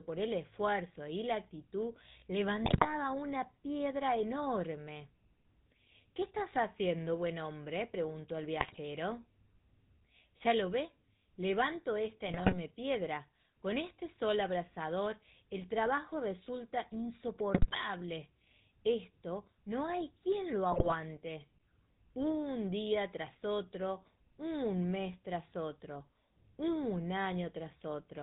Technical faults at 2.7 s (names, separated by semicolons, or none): GSM full-rate codec; GSM bit errors